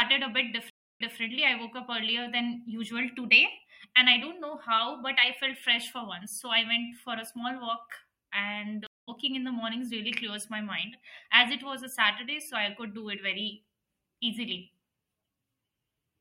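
At 0.70 s, after "a bit", the speech drops out for 0.30 s. This is a stream reconnect. The fresh decoder resumes 0.19 s earlier, repeating audio before "I woke up earlier". At 8.87 s a second reconnect silences 0.21 s, then skips slightly ahead into "in the mornings really".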